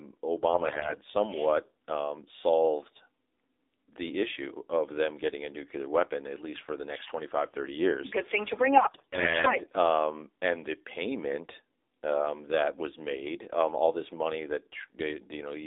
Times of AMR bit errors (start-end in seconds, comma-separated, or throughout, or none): 0.48-0.98, 8.76-9.55